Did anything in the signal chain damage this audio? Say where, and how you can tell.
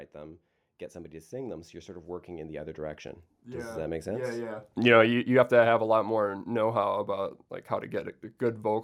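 Yes. Automatic gain rising, 0.13 to 4.76 s: call-processing AGC judged the input too quiet and raised gain by about 14 dB, so speech and background swell together.

Automatic gain falling, 4.72 to 7.02 s, just before "like how": the same AGC found the input too loud or its background noise too strong, then pulled gain down by about 5 dB, sinking speech and background together.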